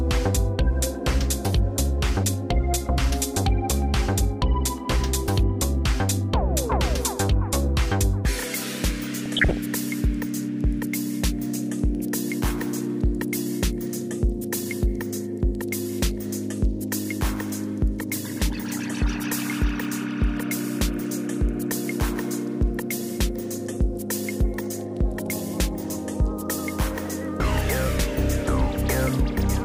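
From 9.26 to 9.57 s, DAB burbling: stray bit errors put short blips of noise into single MP2 sub-bands, not a dropout's silence.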